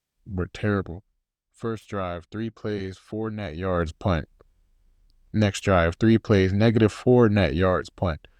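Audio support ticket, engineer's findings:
Zipper noise 3.54–3.88 s, after "three plays four net". Gain ramp in 1 dB steps, roughly 50 per second, about 15 dB total. Unsmoothed per-buffer gain updates. Each step clicks.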